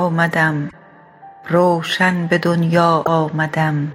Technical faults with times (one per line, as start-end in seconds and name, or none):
0.66-0.73 damaged data in a compressed stream
3.01-3.07 damaged data in a compressed stream